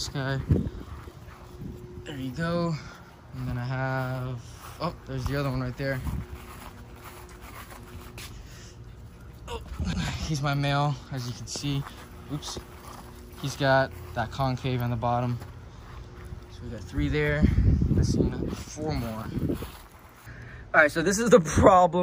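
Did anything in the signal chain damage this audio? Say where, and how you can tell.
Yes. Two brief stutters stand out, at 9.93 s and 20.03 s, where roughly a tenth of a second of sound plays a second time, leaving a hitch and click at each join. The even 10 s spacing points to the buffering or block-processing stage and a fault of overlapping chunks: the audio was handled in 10 s blocks, each starting about 100 ms before the previous one ended, so that overlap repeats at every boundary.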